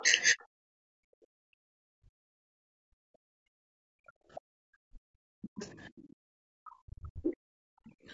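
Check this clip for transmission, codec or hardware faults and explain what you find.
Several faults are audible. They come from a video-call chain: compression, echo cancellation and one lost frame.

Low-delay AAC compression runs throughout. The speech sounds rough and grainy, with noise between the harmonics. The likely cause is AAC-ELD. Its short frames resolve pitch poorly. The damage is plain and fits a low rate near 32 kbps. The top band stops at 8 kHz, in line with the call's microphone processing.

The other side's voice leaking through appears at 0.00 to 0.43 s, 4.35 to 5.88 s and 8.09 to 8.13 s. A faint second voice sits well below the talker, very quiet at first and a little stronger mid-clip. The likely cause is loudspeaker echo the canceller did not fully remove.

Speech suppressed in double talk occurs from 0.01 to 0.55 s and from 2.63 to 7.34 s. The talker's voice dips sharply, by around 40 dB at worst, for short stretches. 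The likely cause is the canceller turning both voices down when they overlap.

Background gated by the echo canceller occurs from 0.83 to 5.51 s and from 7.62 to 8.08 s. The room sound drops out by about 40 dB in bursts, then returns. The canceller clamped the microphone while the loudspeaker played.

AAC frame loss with muting occurs from 6.70 to 6.72 s. A brief 20 ms dip opens in the sound. The decoder zeroed a missing frame, probably a single one, and overlapping windows faded it out and back in.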